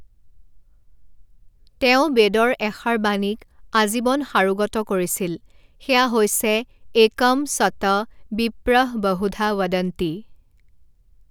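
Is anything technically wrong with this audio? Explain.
No, nothing here stands out as a technical problem; the speech comes across as it should, with nothing to flag.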